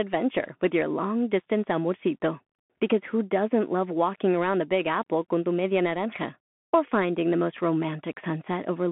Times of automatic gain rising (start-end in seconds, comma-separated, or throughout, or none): none